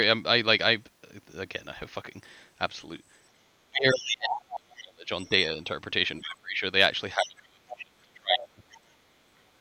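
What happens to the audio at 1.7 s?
Nothing goes wrong at 1.7 s; the audio is intact there.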